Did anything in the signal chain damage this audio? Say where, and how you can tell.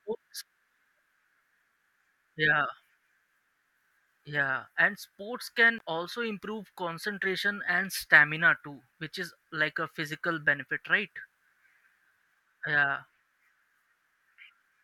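Yes. Right after "and sports", at about 5.78 s, the speech drops to a 19 ms silence before "also improve concentration and" picks up. That's likely a Bluetooth stall on the wireless link: delayed packets let the headphone buffer run empty, so playback briefly paused.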